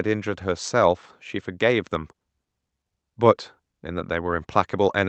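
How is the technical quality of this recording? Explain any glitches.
No glitches or technical faults can be heard anywhere.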